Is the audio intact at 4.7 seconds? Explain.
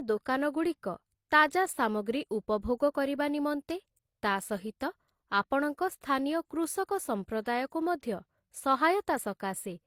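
No, the speech at 4.7 seconds, like the whole clip, has layered smearing and swirly artefacts with nothing above 20.2 kHz, likely transcoding between lossy codecs, pointing to HE-AAC re-encoded through Opus.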